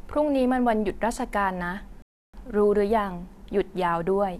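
A rebuffering stall interrupts this speech recording at 2.02 s: the sound drops to silence for about 0.31 s and picks up again at 2.34 s exactly where it left off. The player ran dry of downloaded audio and waited for more, so the gap adds time without removing anything. That seamless resumption separates it from a dropout or packet loss, where the missing stretch would be skipped and the speech would jump ahead.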